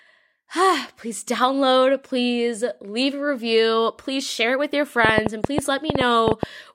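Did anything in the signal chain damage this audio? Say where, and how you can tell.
Yes: a train of clicks runs from 5.05 to 6.44 s, about ten similar pops at uneven spacing near 8 per second, well above the speech, likely interference at the interface.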